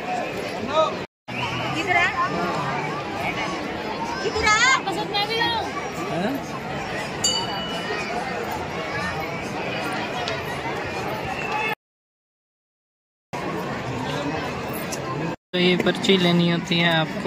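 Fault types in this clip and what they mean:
Audio dropout to silence: from 11.74 to 13.33 s the sound cuts to silence for about 1.6 s, likely a lost input while recording continued.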